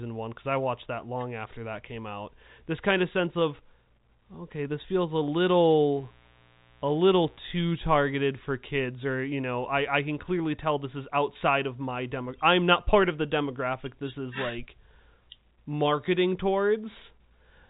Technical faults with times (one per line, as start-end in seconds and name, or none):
5.97-7.67 mains buzz